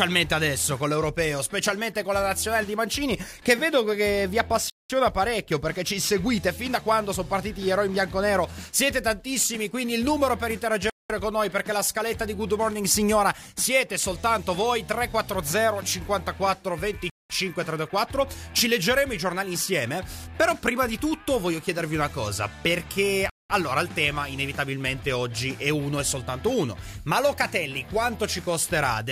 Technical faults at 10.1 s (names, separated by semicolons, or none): none